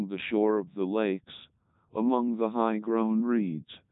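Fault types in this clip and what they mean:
Codec 2 vocoder: speech resynthesised from sine waves, heavily robotic and buzzy, which fits 3.2 kbit/s; spectrogram shows stiff harmonics, empty above 3.8 kHz.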